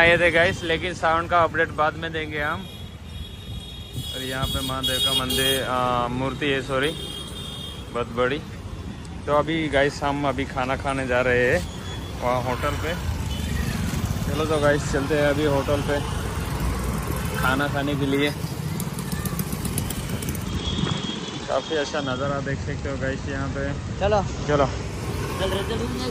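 From 20.23 s to 25.10 s the audio shows digital radio blending to analogue: the receiver loses its digital stream and cross-fades over about 350 ms to the station's FM broadcast, so hiss sits roughly 25 dB below the signal, at unchanged level, before blending back.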